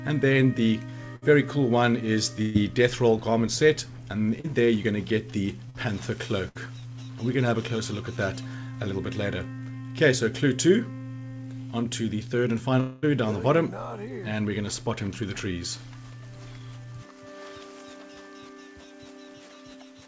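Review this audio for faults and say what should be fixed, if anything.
Bursts of packet loss at 1.16–1.24, 2.42–2.56, 5.70–5.76 and 6.48–6.57 s: each time a run of packets failed to arrive, and the receiver stretched the last sound for about 60, 130, 45 and 65 ms as a fading buzz or hiss. It then skipped ahead, unlike a brief smear.

Short concealed packet loss at 4.40–4.46 s: a hole of about 40 ms was patched by extending the preceding sound for about 34 ms and blending back. It is heard as a quick smear or wobble.

Long network dropout at 12.80–13.04 s: the sound is replaced by a continued, decaying buzz or hiss lasting about 220 ms before the audio picks up later with that stretch gone. This is likely a network stall. It is longer than the bursts, though it never reaches silence.

The band stops at 8 kHz throughout, which fits G.722 on the call path. To prevent these faults, fix the network loss and raise the jitter buffer depth or add FEC so that missing packets can be recovered rather than concealed.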